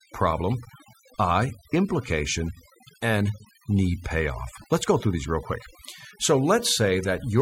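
Overdone noise removal runs throughout: a suppressor set too strong cuts frequency bands near its noise estimate, leaving near-silent, twinkling gaps.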